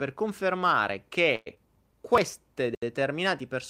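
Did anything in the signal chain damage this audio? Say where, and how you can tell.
Yes. At 1.35 to 1.48 s, a call audio freeze inserts a 108 ms smeared fill that continues the last sound. The likely cause is packets held up on the network and an empty jitter buffer.

At 1.54 to 1.58 s, a skip ahead drops around 70 ms of audio in the network or jitter buffer. The waveform shows an abrupt splice joining mismatched segments.

From 2.62 to 3.00 s, a jitter buffer slow-down repeats pitch periods, adding 39 ms and playing at 91% speed. The spectrogram shows stretched harmonics at the same pitch.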